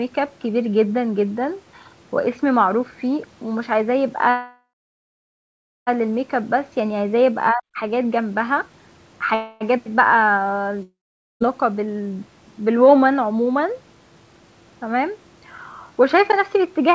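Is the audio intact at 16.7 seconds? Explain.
No. From 16.00 to 16.94 s a jitter buffer speed-up is under way: the receiver trims short pitch-period slices, roughly 40 ms in all, so speech runs about 104% fast at unchanged pitch. On a waveform, syllables sit marginally closer; spectrogram harmonics stay level.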